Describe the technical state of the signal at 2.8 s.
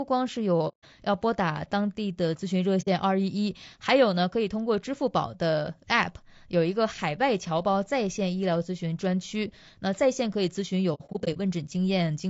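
At 2.81 s the decoder received nothing for a short stretch, about 60 ms' worth, which points to two lost AAC frames. It zeroed their spectrum, an AAC frame loss with muting. The overlapping windows fade the speech out and back in by 2.88 s, leaving a soft-edged gap.

Underneath, the speech is plainly rough and grainy, likely from low-delay AAC compression (AAC-ELD) at a rate around 32 kbps. Its short frames resolve pitch harmonics poorly, so noise fills between them and the top band sounds thin and synthetic.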